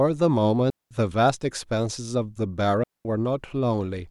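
Digital wireless dropouts occur twice in this speech, at 0.70 to 0.91 s and again at 2.84 to 3.05 s, each muting the audio for about 210 ms. In both cases the wireless receiver stopped getting enough usable data from the transmitter and muted its output rather than pass corrupted audio, fading down and back up almost instantly. The result is a clean hole of near silence cut into the speech, with no crackle, hiss or noise burst on either side.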